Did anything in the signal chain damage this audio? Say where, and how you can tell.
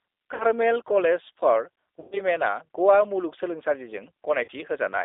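Yes. At the codec stage, the whole clip has passed through the G.729 codec at 8 kbit/s. The speech sounds rough and synthetic, and the band is limited to about 300 Hz to 3.7 kHz. A spectrogram would show an empty region above 3.7 kHz and coarse, smeared harmonics below it.

At the network stage, VoIP packet loss concealed by the speech codec occurs at 0.34–0.44 s, 2.0–2.21 s and 4.44–4.50 s, covering roughly 60, 120 and 40 ms of lost audio. That fits 20 ms packets. The decoder repeats its last pitch and filter with falling gain, so the sound turns into a fading buzzy tone or coloured noise. A spectrogram would show frozen, stretched-out content there, and the waveform would show a decaying envelope with weak recovery just afterwards.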